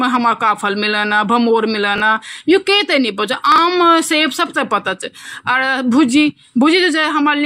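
Chunks out of order at 1.96 to 2.00 s and 3.52 to 3.58 s: a 20 ms chunk of speech plays one chunk late, then another two chunks late. Nothing is lost, but each swap creates three hard joins, heard as a brief jumbled stutter.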